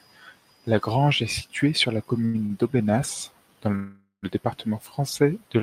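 Just after "est située sur la", the speech hits two short stalls from late packets. The first runs from 2.25 to 2.36 s, the second from 2.46 to 2.52 s. Each time a packet was not ready and the jitter buffer ran dry. The receiver held the last sound for about 88 ms, then about 39 ms, and resumed at the same point. Nothing is lost. The sound just drags briefly, with a faint buzz or dip.

From 3.75 to 4.25 s there is a call audio freeze. The last sound is drawn out into a fading buzz or hiss. It then drops to silence for about 110 ms before the speech picks up where it stopped. About 477 ms of gap is inserted, with nothing missing. The likely cause is packets held up in transit, which emptied the jitter buffer.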